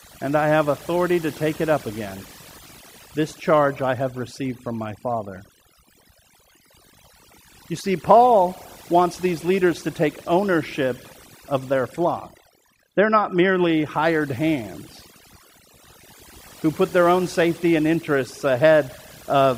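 Throughout the clip, overdone noise removal strips frequency bands near the noise estimate, leaving near-silent gaps with twinkling specks.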